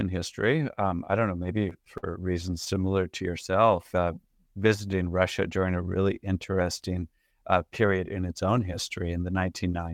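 Repeated stalls (stutter) from 0.75 to 2.05 s: late packets drained the jitter buffer eight times, and the receiver stretched the last sound, up to 50 ms, so the speech drags and stutters. Jitter buffer slow-down from 2.74 to 4.52 s: repeated pitch periods add 135 ms to rebuild the reserve, so the speech runs at 93% speed with unchanged pitch. Jitter buffer speed-up from 6.51 to 7.99 s, after "during a really" and before "in its own": trimming about a tenth of a second of pitch periods shrinks excess delay, so the speech sounds hurried, at 108% speed.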